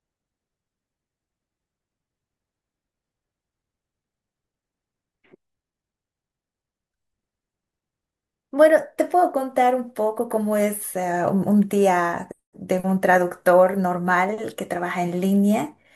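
Nothing here stands out as a technical fault; the speech carries on steadily from the first moment to the last without anything catching the ear.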